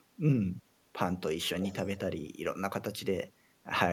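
Speech, with an echo leak between 1.6 and 1.99 s. A delayed copy of the voice comes back about 370 ms behind the original. It sits roughly 10 dB below the direct speech. The likely cause is a far end playing the call over a loudspeaker. Its echo canceller failed to fully remove what its microphone picked up, and that residue was sent back.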